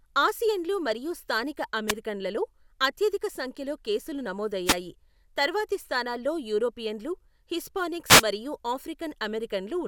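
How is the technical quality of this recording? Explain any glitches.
The recording has three wireless microphone noise hits. They come at 1.87 to 1.93 s, just after "ఆసియన్లు మరియు స్థానిక", then at 4.65 to 4.76 s and 8.07 to 8.23 s. Reflections briefly cancel the FM radio signal. Receiver noise surges over the speech as a short swish of static.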